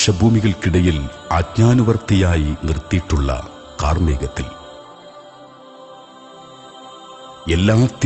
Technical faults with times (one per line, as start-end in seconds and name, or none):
none